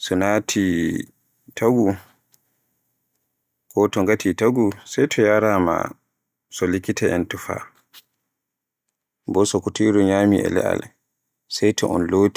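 No technical faults can be heard anywhere in the speech recording.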